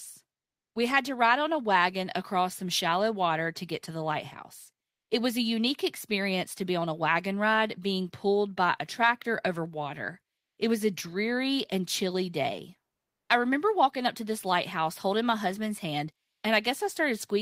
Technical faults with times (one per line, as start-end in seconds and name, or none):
16.31-16.43 comfort noise in place of the background